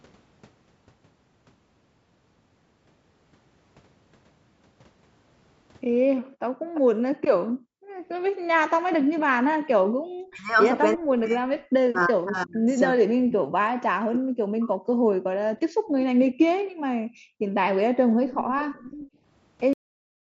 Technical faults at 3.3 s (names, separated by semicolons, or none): none